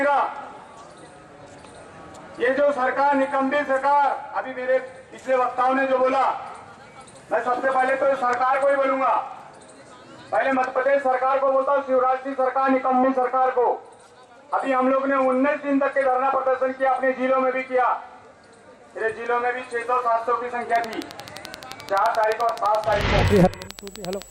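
From 20.76 s to 24.23 s a steady ticking rides over the sound, about forty sharp clicks at a regular 11.6 per second, peaking well above the programme level. This train of clicks is likely electrical interference or a faulty connection or power supply injecting repeated pulses.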